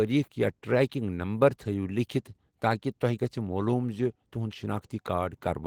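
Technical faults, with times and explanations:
The signal shows no audible technical faults.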